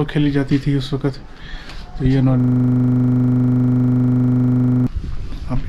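From 2.40 to 4.87 s, a system hang loop repeats one 40 ms buffer at 25 Hz: a rattling stutter, exact repeats rather than a stuck tone or dropouts.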